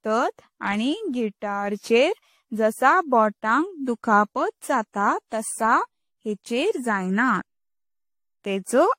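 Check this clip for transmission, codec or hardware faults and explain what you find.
There is one codec fault, and it runs through the whole clip. Generation loss, throughout: the speech was likely decoded and re-encoded around five times with AAC-LC at a rate that fits 64 kbit/s, each pass requantising on a shifted frame grid. The errors pile up into swirly, hollow smearing and blurred consonant attacks, with nothing above 16.6 kHz.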